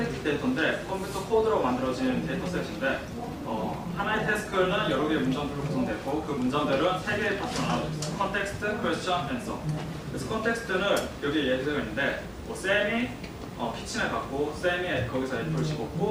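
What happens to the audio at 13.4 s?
Nothing goes wrong at 13.4 s; the audio plays through that moment intact, with no dropout, click or other fault.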